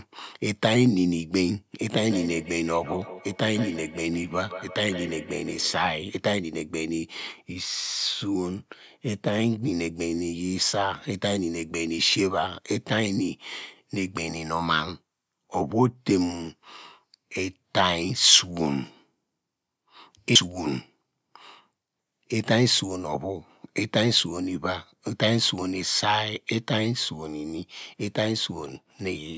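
From 1.88 to 5.93 s the speech is shadowed by a thin, ringing repeat trailing each syllable by roughly 150 ms, its loudest return about 12 dB below the direct speech. This is feedback echo between two devices: a second device in the same room on the call plays the speech aloud, the microphone recaptures it, and the echo canceller cannot remove sound its own device never played. The call microphone path meanwhile caps the audio at 8 kHz.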